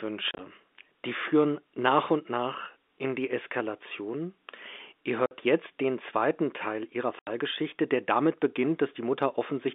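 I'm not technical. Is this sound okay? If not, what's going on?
No. The speech has packet loss filled with silence: bits of audio got lost on the way, and the receiving end played nothing in their place. You hear three short holes with hard edges, at 0.31 to 0.39 s (several tiny gaps, the longest about 30 ms), at 5.26 to 5.31 s, and at 7.19 to 7.27 s. Unlike a system that hides losses by smearing or repeating sound, this leaves true silence, in even chunks that fit 10 ms packets. The thin, phone-line tone is simply how telephone audio sounds.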